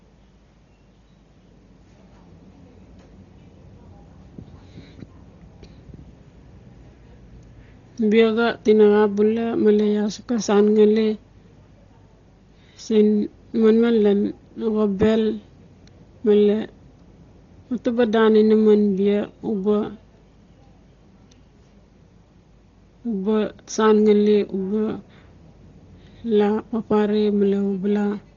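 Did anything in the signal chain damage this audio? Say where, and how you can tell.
Yes. Dolby Digital compression damages the speech throughout, at the codec stage. Nothing survives above 6.9 kHz, so the voice sounds dull, and the harmonics carry a rough, fluttering noise. The damage is heavy. That pattern likely comes from an AC-3 style encoder starved of bits, consistent with roughly 32 kbps. It cut the bandwidth and left many frequency lines without mantissa data, and the decoder then filled those gaps with dither noise.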